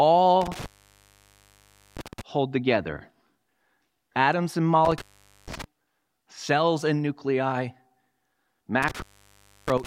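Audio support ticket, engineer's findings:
Intermittent contact at 0.41–2.21 s (before "hold together"), 4.85–5.64 s (after "atoms and"), 8.82 s to end. Speech drops out about 1.31 s, 0.46 s and 0.65 s, with crackle at the edges and faint hiss. Loose cable or plug opening momentarily.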